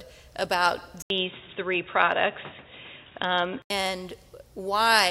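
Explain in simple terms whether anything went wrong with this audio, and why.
Likely an input switched to a poorer device, from 1.02 to 3.70 s: after a brief gap, the sound turns muffled, losing everything above 3.8 kHz, with new background noise.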